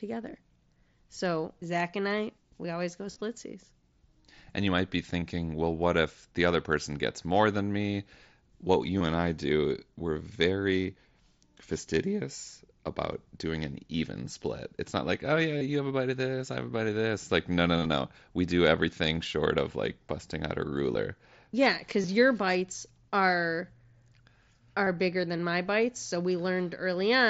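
Concealed Bluetooth headset packet loss occurs at 3.12 s after "I we always go", then at 5.2, 8.99, 15.58, 17.79, 20.93, 22.02 and 24.85 s. Lost headset packets were patched by repeating recent waveform, leaving brief buzzy, tonal smears of about 15 to 52 ms.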